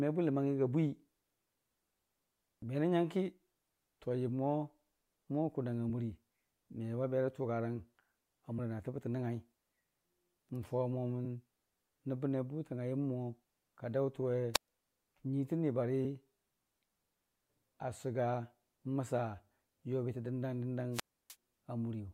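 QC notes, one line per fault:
2.62 s, 8.58 s and 11.24 s, damaged data in a compressed stream: each is a very short chirp or blip, only about 10 to 15 ms long, cutting sharply across the speech. Part of the compressed data at these points was corrupted, so the decoder misread those frames and produced a burst of garbage. It then lost its place in the stream and had to find the next valid frame header before clean decoding could resume.
14.54–14.68 s and 20.92–21.36 s, wireless microphone squelch dropout: hiss or static swells briefly, the speech drops into a hole of near silence, and then the voice comes back. The first hole lasts about 123 ms and the second about 304 ms. The radio signal from an analogue FM microphone faded so far that the receiver's squelch muted its output until the signal recovered.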